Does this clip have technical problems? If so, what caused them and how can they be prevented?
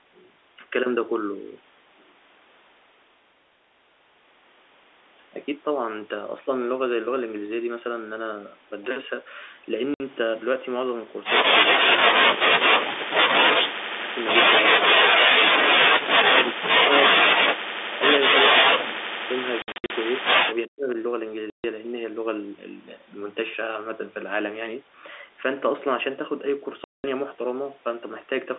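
Yes. Packet loss filled with silence: the network dropped packets and the receiver inserted silence instead of concealing the gaps. The result is hard-edged holes at 9.94 s (60 ms), 19.62 to 19.9 s (200 ms scattered, runs up to 60 ms), 21.5 s (140 ms) and 26.84 s (200 ms), sized to fit 20 ms packets. Enabling packet loss concealment and a jitter buffer would prevent this.

Speech suppressed in double talk: the echo canceller, likely confused by both sides talking at once, clamped the near talker while the far end spoke. The sound drops by as much as about 40 dB in pieces at 11.89 to 13.22 s, 13.54 to 14.17 s, 14.7 to 15.45 s, 16.0 to 16.88 s, 17.1 to 17.98 s, 18.48 to 19.24 s and 20.68 to 20.97 s. A canceller with proper double-talk detection, or a headset, prevents it.

Echo leak: a loudspeaker's sound likely slipped past one side's echo canceller and was sent back. The result is a very faint copy of the sound, delayed by 373 ms, at 20.55 to 20.67 s. 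Better echo cancellation or headphones on that side would stop it.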